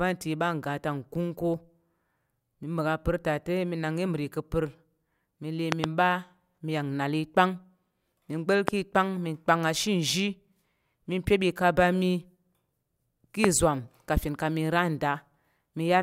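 A voltage spike, likely from a plug, switch, static or driver glitch, enters the chain three times as a loud pop: a double pop at 5.72–5.86 s, then single ones at 8.68–8.70 s and 13.44–13.46 s. Each is a sharp thump some 20 to 25 dB above the speech, which continues beneath.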